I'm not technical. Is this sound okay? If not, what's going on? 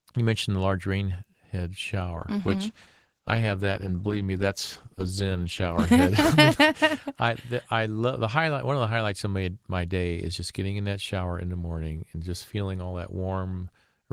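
No. A call bitrate drop runs from 2.18 to 6.01 seconds. The connection judged it had less room, so the speech was squeezed into far less data for nearly four seconds. It sounds rougher and more muffled until the quality comes back.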